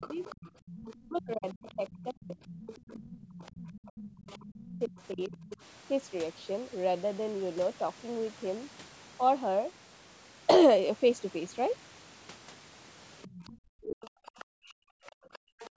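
From 0 to 5.57 s, the echo canceller likely failed to remove the loudspeaker feed from the microphone, so the other side's voice leaks through, a second talker faintly audible about 20 dB below the main speech. In the same stretch, 0.07 to 5.52 s, speech is suppressed in double talk: with both sides active, the canceller likely could not tell the talker from the echo and turned both down. The main voice dips by up to around 30 dB and loses pieces, about three seconds in all.

Within that, from 0.54 to 0.62 s, the background is gated by the echo canceller. It clamped the microphone while the loudspeaker played, and the room sound drops by about 10 dB for roughly 40 ms before returning.

The same pattern recurs near the end. From 13.22 to 15.7 s the other side's voice leaks through again, louder this time, about 15 dB under the speech. From 13.46 to 15.65 s the speech is suppressed in double talk, with chopped-out fragments falling by as much as 40 dB and under a second affected in total. 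From 15.14 to 15.3 s the echo canceller gates the background hard, so the room sound falls away by about 40 dB for some 150 ms.

The call's microphone processing rolls off the lowest bass and carries nothing above 8 kHz.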